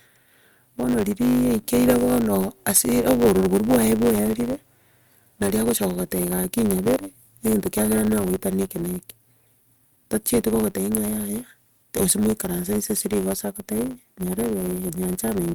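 A block size mismatch with truncation runs through the whole speech clip. One stage hands over blocks larger than the next stage accepts, which fits 512-sample blocks being written, and the tail of every block is discarded. Each cut leaves a jump in the waveform, so a buzz at 100 Hz sits under the speech throughout. Losing those block ends also makes the speech run about 1.07 times faster than normal, while its timbre stays the same.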